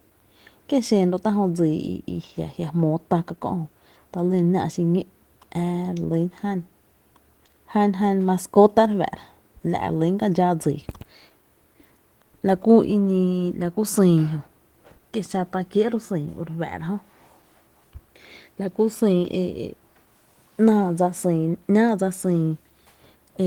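No technical faults turn up anywhere in this speech; the Opus voice compression is running in its hybrid mode at 20 kbps with full bandwidth reaching about 20.1 kHz, and its coding leaves only a light trace on the sound.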